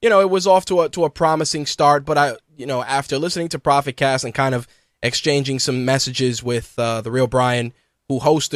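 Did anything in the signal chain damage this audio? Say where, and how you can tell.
No, nothing along the chain has left a mark on this speech that I can hear, so there's no stage to point at.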